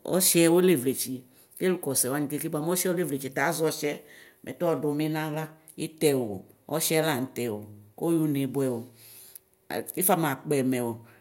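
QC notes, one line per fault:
No faults heard in this clip.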